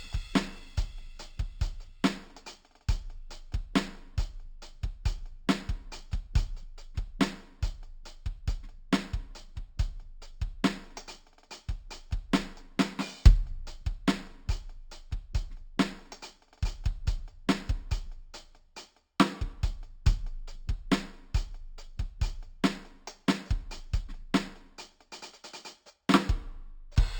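A music clip with imaging from linear upsampling running throughout. The sound was raised to a higher rate by joining samples with straight lines, which points to a 12 kHz source brought up to 48 kHz. That crude interpolation dulls the top of the original band and leaves a mirrored copy of the spectrum in the 6 to 12 kHz region, roughly 25 dB below the music, heard as a faint metallic shimmer on bright, high content. Unlike aliasing, these images mirror the real spectrum above the band edge rather than folding tones down into unrelated pitches.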